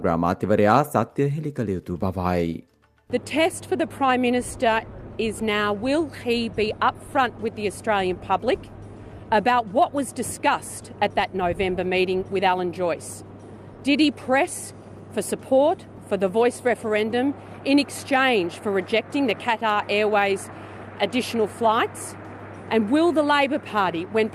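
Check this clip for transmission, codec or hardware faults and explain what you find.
Nothing in the signal points to a technical fault, with level, continuity and timing holding steady throughout the clip.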